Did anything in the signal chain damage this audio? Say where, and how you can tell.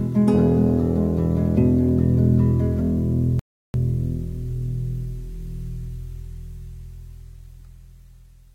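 Yes. A rebuffering stall at the playback stage: the music cuts to silence at 3.39 s and resumes at 3.74 s exactly where it stopped, adding about 347 ms. The player exhausted its downloaded audio and paused until more data arrived, so nothing is lost.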